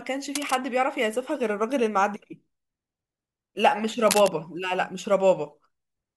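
A worn cable or connector being moved is the likely cause of cable scratch noise. Its contact resistance fluctuates, adding uneven bursts of scratching at 0.35–0.56 s, about 10 dB below the speech, and louder at 4.07–4.28 s, about 5 dB below.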